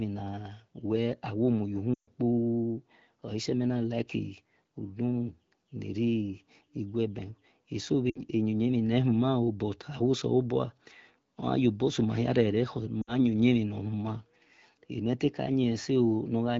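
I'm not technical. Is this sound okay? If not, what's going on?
No. Lost AMR speech frames: parts of the phone signal were damaged over the radio link, so the phone had to guess those moments by repeating the last good bit of voice and letting it fade. You hear this three times: a quick fade to near silence from about 1.94 to 2.09 seconds, and shorter drops to near silence at about 8.09 to 8.21 seconds and 13.01 to 13.14 seconds, with the voice briefly weak or rough as it returns.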